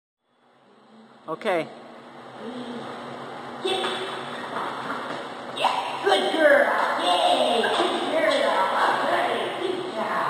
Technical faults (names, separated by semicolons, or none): imaging from linear upsampling